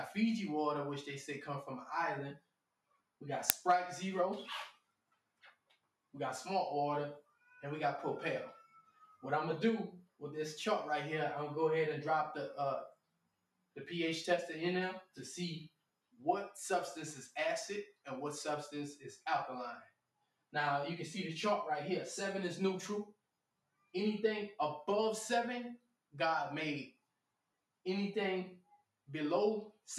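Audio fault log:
2.37 to 3.21 s, 4.73 to 10.21 s, 12.92 to 16.21 s, 17.92 to 20.54 s, 23.13 to 23.94 s, 25.78 to 29.87 s: sound cut by the noise suppressor. In each of these stretches the suppressor mistakes real sound for noise and pulls it down, by about 18 to 19 dB at its deepest. It doesn't clamp the whole window, just parts of it, adding up to somewhere between half a second and a couple of seconds each time. The steadier, trailing parts sink or get their tails chopped, while sharp onsets mostly survive.
3.50 s: uninitialised buffer. A tiny block, about 1.45 ms, gets played out before any real audio lands in it, so whatever junk was sitting in memory comes out as samples. You hear it as a very short, loud crack of digital noise, and its length fits a 64-sample buffer. Because the leftover values can repeat, there may be a thin, high tonal edge riding on the burst.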